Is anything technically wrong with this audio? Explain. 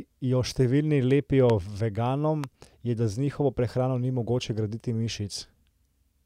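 Yes. The speech has two loud pops, sharp single clicks from about 1.50 to 1.52 s and 2.44 to 2.46 s, peaking roughly 15 dB and 10 dB above the speech, which continues underneath. Each is likely a brief voltage spike from a switch, static or driver glitch.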